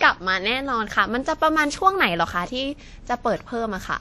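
From start to end the speech carries a ringing, washy quality, with a hiss that swells and fades with each syllable, and the damage is plainly audible. This is likely WMA compression at a low bitrate, consistent with roughly 48 kbps: a transform codec with long blocks smears quantisation noise over tens of milliseconds and zeroes weaker components. A spectrogram would show nothing above 14.4 kHz, patchy gaps between harmonics, and noise smeared around each onset.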